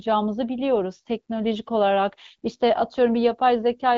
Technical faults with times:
none

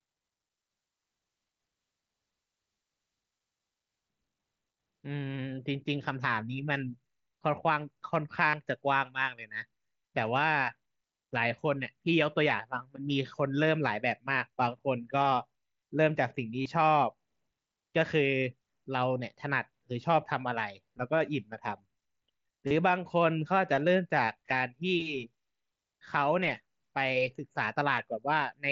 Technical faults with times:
8.50-8.53 concealed Bluetooth headset packet loss
16.62-16.66 concealed Bluetooth headset packet loss
22.67-22.71 concealed Bluetooth headset packet loss
24.26 concealed Bluetooth headset packet loss

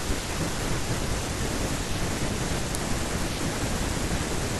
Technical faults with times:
2.75 uninitialised buffer

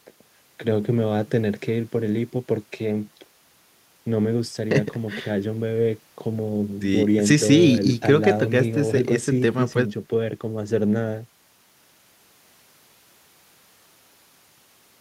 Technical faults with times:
none

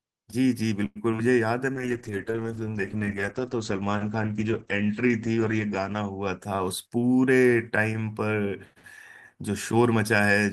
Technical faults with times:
0.85-0.98 call audio freeze
1.12-1.24 short concealed packet loss
1.75-7.27 call bitrate drop
6.47-7.78 jitter buffer speed-up

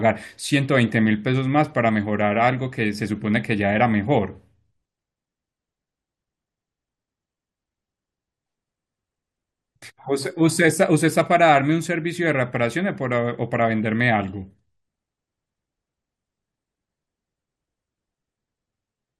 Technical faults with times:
none

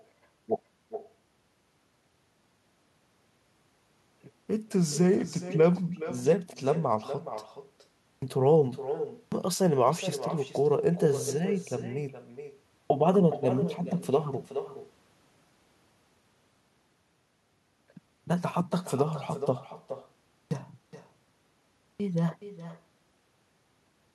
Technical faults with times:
0.00-24.15 echo with no canceller
8.06-8.22 clipped start after a pause
9.16-9.32 clipped start after a pause
12.74-12.90 clipped start after a pause
20.35-20.51 clipped start after a pause
21.84-22.00 clipped start after a pause

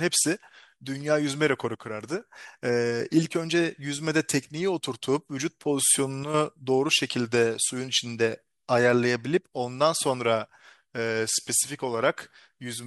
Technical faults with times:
1.75-2.21 one channel drops out
6.23-6.34 one channel drops out

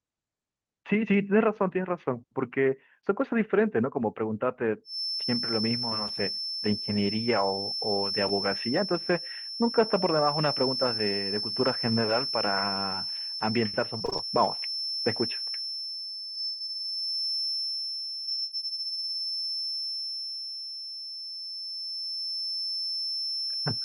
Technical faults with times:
4.83-23.84 feedback whistle
13.97-14.21 repeated packet loss (robotic sound)
16.35-16.72 repeated packet loss (robotic sound)
18.21-18.60 repeated packet loss (robotic sound)

